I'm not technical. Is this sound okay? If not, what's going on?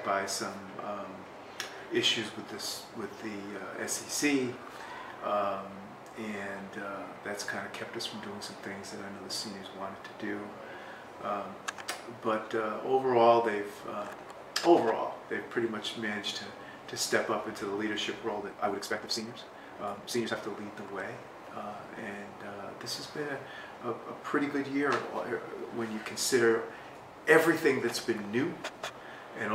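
No. A time-stretched section from 18.36 to 20.36 s plays 1.68 times faster and sounds rushed at unchanged pitch, likely software squeezing it by dropping short pieces.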